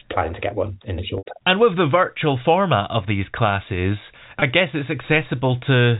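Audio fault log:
1.18–1.25 s and 4.40–4.42 s, packet loss with pitch repetition: at 1.18 s the sound briefly holds on a buzzy, slightly frozen tone that fades into silence within the roughly 80 ms gap before resuming with a short cross-fade, which fits around four lost packets. At 4.40 s there is a shorter catch of about 20 ms, consistent with a single packet. In both spots the receiver filled the gap by looping the last pitch period and fading it out, so the short loss at 4.40 s is only a brief held buzz while the longer one at 1.18 s drops to silence, over the narrowband telephone sound.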